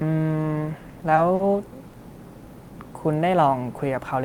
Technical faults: short stall from a late packet

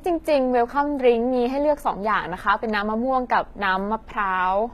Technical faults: HE-AAC compression

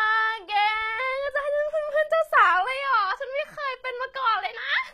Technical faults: HE-AAC compression

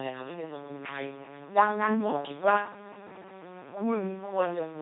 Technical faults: LPC-10 vocoder

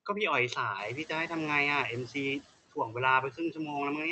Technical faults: noise suppressor artifacts; noise suppressor catching up; speech cut by the noise suppressor

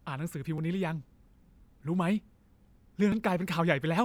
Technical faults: dropped buffer (overrun)

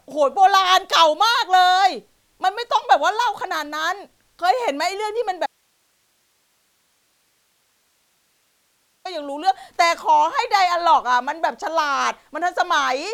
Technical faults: audio dropout to a faint residue

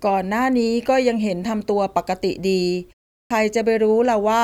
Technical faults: clipped start after a pause

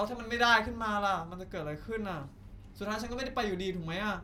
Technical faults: none

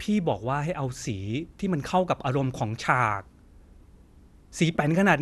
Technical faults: MP2 compression

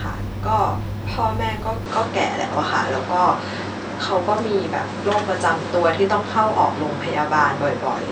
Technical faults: input switched to a poorer device

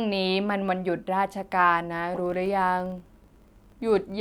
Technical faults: filter restarted on every block

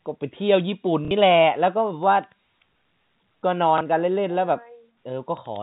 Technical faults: packet loss with last packet repeated

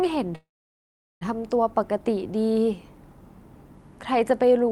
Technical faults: call audio freeze

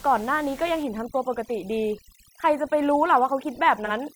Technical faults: overdone noise removal; AAC frame loss with concealment

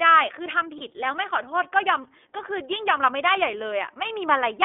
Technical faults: iLBC codec; lost iLBC frames

